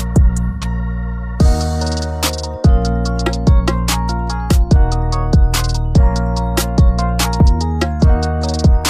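From 0.48 to 0.64 s the sound turns smeared and noisy, consistent with AAC frame loss with concealment. About 128 ms went missing, which fits three lost frames, and the decoder filled in by reusing the last good spectrum. On a spectrogram this shows as a blurred, texture-less block.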